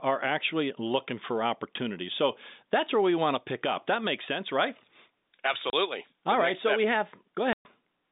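At 5.70 s the speech drops out for 30 ms, and at 7.53 s a longer 120 ms gap follows. Both are packet loss filled with silence: audio packets never arrived, so the receiver played silence in their place. The lengths point to 30 ms packets, one lost and then four in a row. On a waveform they appear as flat-line gaps with sheer edges, and on a spectrogram as blank vertical bands cut cleanly across the narrow telephone band.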